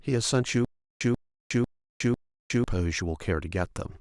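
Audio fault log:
0.65–2.64 s, stutter with silent gaps: the speech halts and a short fragment of about 137 ms is replayed four times, each burst followed by roughly 361 ms of dead digital silence, so the pattern recurs every 498 ms. The even spacing and identical repeats point to a likely playback or stream stall, where each retry re-plays the last buffered piece before running dry. Whatever speech belonged in that two-second stretch never arrives.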